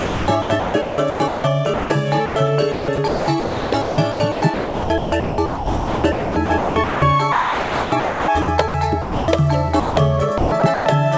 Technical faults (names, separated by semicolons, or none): sound chopped by the voice detector; sound dropped by the voice detector